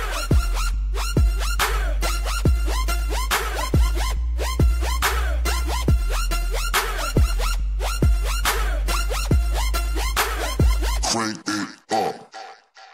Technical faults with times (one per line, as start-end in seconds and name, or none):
none